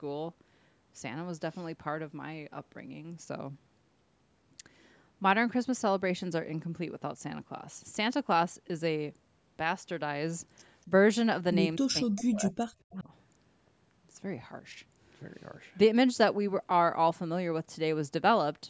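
At 10.87 to 10.91 s the speech dips slightly, by a few decibels. From 11.77 to 13.09 s it drops much harder, by roughly 35 dB. This is likely speech suppressed in double talk: the echo canceller mistook overlapping talk for echo.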